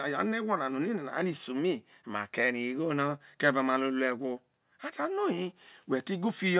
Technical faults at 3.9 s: none

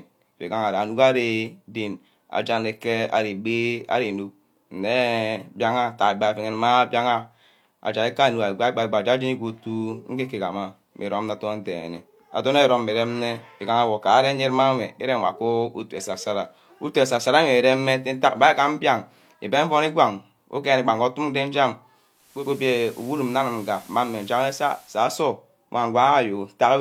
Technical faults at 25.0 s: digital radio blending to analogue

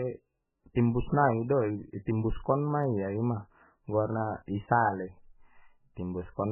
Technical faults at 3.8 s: MP3 compression

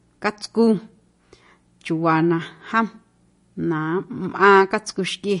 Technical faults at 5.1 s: MP3 compression

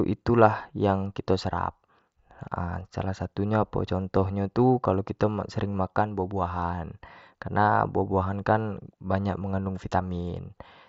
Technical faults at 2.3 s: none

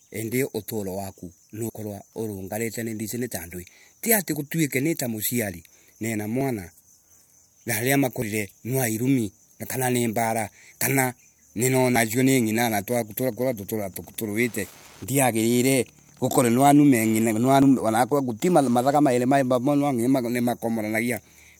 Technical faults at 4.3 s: dropped buffer (overrun)

